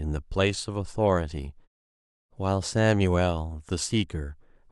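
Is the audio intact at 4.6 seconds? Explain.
Yes, the audio is intact at 4.6 seconds, with no fault at that moment.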